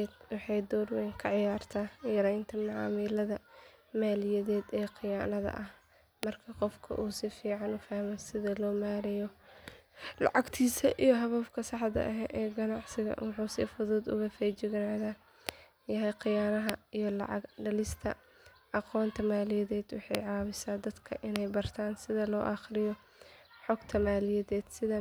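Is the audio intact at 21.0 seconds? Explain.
Yes, the speech at 21.0 seconds plays through intact, with no dropout, click, distortion or other fault at that moment.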